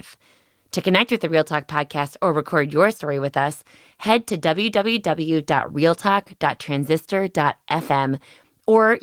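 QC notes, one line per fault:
No faults found in this speech recording; nothing to log.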